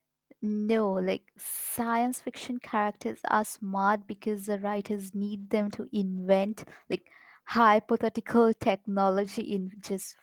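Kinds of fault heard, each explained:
No technical fault can be heard anywhere in the speech recording, with the signal holding steady and continuous throughout.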